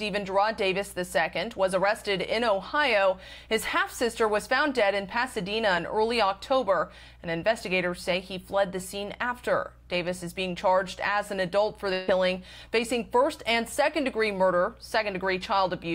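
At 11.93 s a burst of packet loss runs to 12.09 s. A short run of consecutive packets failed to arrive in time, and the receiver concealed the roughly 140 ms gap by extending the last received sound while fading it down. It comes across as a brief held, decaying tone or hiss with no real content. When playback resumes, about 140 ms of the original audio has been skipped.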